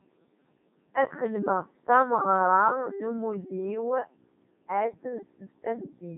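From start to finish the speech sounds robotic and buzzy, with heavy damage and nothing above 3.8 kHz. This is the Codec 2 vocoder, which fits its 3.2 kbit/s mode: only pitch, voicing, energy and spectral shape survive, and the voice is rebuilt from sine waves.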